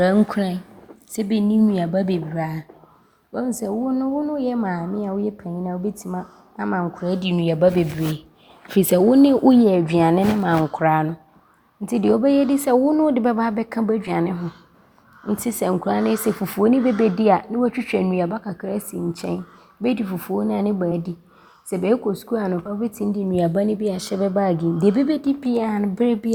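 At 14.07 to 14.10 s, again at 20.91 s just after "fufuo no a ne", and at 22.65 to 22.68 s, compressed frames are skipped. Whole 20 ms frames were missing or rejected by the decoder, so the speech jumps ahead by about two frames (roughly 40 ms) in the first two cases and about three (roughly 70 ms) in the last. The waveform shows an abrupt envelope discontinuity, and the spectrogram shows a brief vertical smear where the harmonics shift suddenly.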